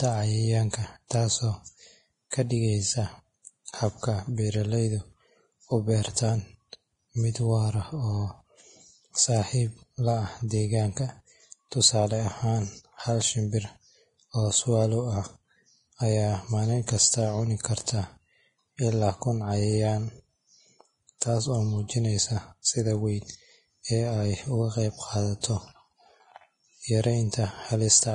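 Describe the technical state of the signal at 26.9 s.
At 26.9 s the speech carries Vorbis compression damage present throughout, most likely from a low bitrate near 28 kbps. Nothing survives above 10.6 kHz, and the remaining treble is coarsely quantised into hiss-like grain. Unlike a plain low-pass filter, it leaves sibilants rough and attacks smeared rather than merely dull.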